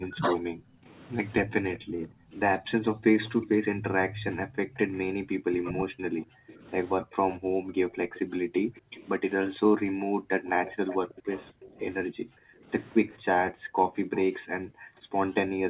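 A speech recording that passed through a call, band-limited to nothing above 4 kHz, which fits a narrowband G.711 telephone codec. Speech suppressed in double talk appears twice. At the very start, 0 to 0.31 s, the echo canceller likely mistook the talker for loudspeaker echo while both sides spoke and pulled the voice down by about 15 dB for roughly a third of a second. From 5.09 to 6.61 s the same confusion is likely behind a much deeper cut, close to 40 dB. The voice is pulled down for a total of around 0.7 s. Background gated by the echo canceller runs from 0.59 s to the end. Whenever the far end played through the loudspeaker, the canceller clamped the microphone hard, by as much as about 40 dB, so the room tone dips or drops out and returns as the gate releases. An echo leak is heard from 1.75 to 3.46 s and again from 7.32 to 14.24 s. Here the other side's canceller likely failed to remove all of its loudspeaker pickup and returned it down the line. 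The result is a faint delayed copy of the voice, lagging by 248 ms and then 255 ms, sitting roughly 20 dB under the direct speech.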